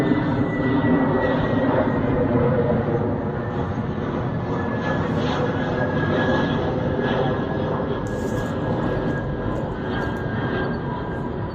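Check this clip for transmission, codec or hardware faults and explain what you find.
No transmission, codec or hardware faults can be heard in the clip; the signal stays continuous and stable throughout, with no dropouts, distortion or interruptions.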